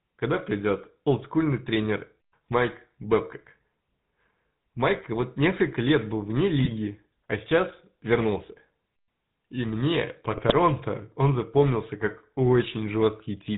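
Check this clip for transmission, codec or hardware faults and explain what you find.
Two faults are present: GSM full-rate coding across the whole recording, and GSM bit errors in two short bursts.

The GSM full-rate codec is audible from start to finish. This codec models the vocal tract and excites it with a sparse, regularly spaced pulse train, discarding most of the excitation detail, and it passes nothing above 4 kHz. The result here is a plainly buzzy, gravelly texture over the speech with a dull top end, consistent with the roughly 13 kbps full-rate scheme.

GSM bit errors occur at 6.63 to 6.69 s, just after "несколько лет был вне" and before "а сейчас вернулся", and again at 10.32 to 10.58 s, after "мне по" and before "он запомнился как". Corrupted bits reaching the decoder scramble the filter, pitch or gain parameters, so the spectrum warps or the level jumps frame by frame. The first burst is brief. 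The second is a longer stretch of breakup.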